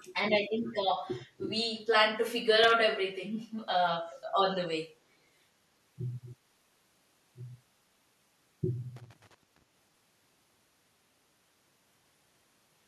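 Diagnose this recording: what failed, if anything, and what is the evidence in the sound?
A faint delayed copy of the speech, roughly 30 dB below it, appears from 0.00 to 0.05 s and from 0.65 to 0.73 s, trailing by 323 ms. On a spectrogram it shows as weak repeats of the speech patterns shifted right by about 0.32 s. This is likely an echo leak at the call-processing stage: the far end's canceller let loudspeaker pickup through.

Loose connector crackle sits in the analogue wiring, at 2.54 to 2.72 s and 8.96 to 9.63 s. A contact making and breaking chops the signal into irregular scratching bursts. The waveform shows spiky dropouts and jumps, and the spectrogram shows scattered broadband vertical streaks.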